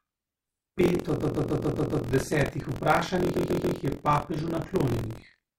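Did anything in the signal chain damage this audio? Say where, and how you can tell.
Yes. At the driver or buffer stage there is buffer tearing throughout: a steady 43.1 Hz rattle, which fits a 1024-sample buffer, where roughly 15% of each period replays audio about 50 ms old. Unlike mains hum, it vanishes in pauses.

In the codec or storage stage, repeated frames make a stutter: a 139.3 ms block loops six extra times from 1.21 to 2.05 s and three from 3.35 to 3.76 s, adding 0.84 s and 0.42 s. Unlike packet loss, nothing is missing.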